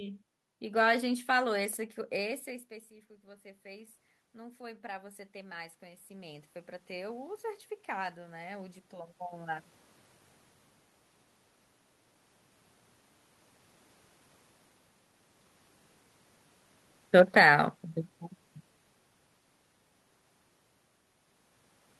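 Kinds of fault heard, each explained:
Automatic gain rising: voice and room noise swell together by about 16 dB from 2.44 to 9.74 s, as the control compensates for a quieter input.
Automatic gain falling: from 17.13 to 17.53 s the sound and its background sink by about 4 dB together, the control lowering gain on a louder input.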